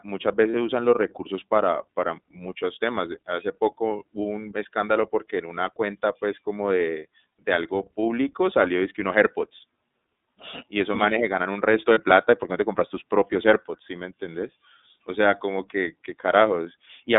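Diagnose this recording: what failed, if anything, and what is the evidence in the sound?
The codec stage is the first fault: the speech has been through iLBC, a narrowband VoIP codec that codes each frame's excitation independently. The audible band runs only from about 250 Hz to 3.7 kHz, so everything above 4 kHz is gone. The coding damage is plainly audible as a rough, slightly synthetic edge on the voice throughout, which fits iLBC's 13.33 kbps mode with 30 ms frames.

The network stage is the second fault: lost iLBC frames. One 30 ms frame went missing at 0.51 to 0.55 s, just before "usan los recursos para", and another at 11.93 to 11.98 s, between "un resto" and "plata y por qué". In each case the decoder filled the hole by repeating the last pitch cycle mixed with noise, which sounds like a brief, slightly buzzy held vowel. Because iLBC frames stand alone, the voice comes back cleanly right after each gap.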